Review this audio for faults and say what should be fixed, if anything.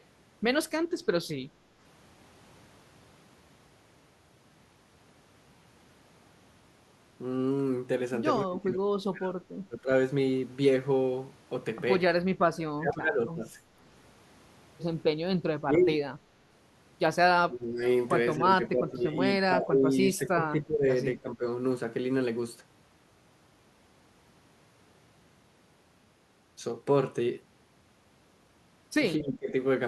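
Speech suppressed in double talk: the voice dips or cuts out at 8.5–9.9, 12.5–13.6, 15.6–15.9, 17.5–17.8, 18.4–19.2, 19.5–20.9, 21.2–21.4 and 29.2–29.5 s, sometimes by around 35 dB. The likely cause is the echo canceller mistaking this side's talk, overlapping the far-end audio, for echo. Tuning its double-talk detection to be less aggressive should fix it.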